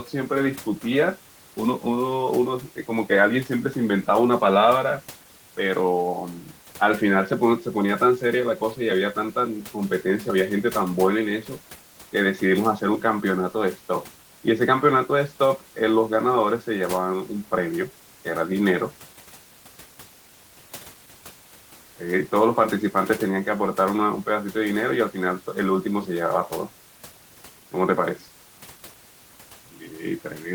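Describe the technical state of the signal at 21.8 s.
At 21.8 s the signal is intact, with only the room's own background noise sitting about 23 dB below the speech.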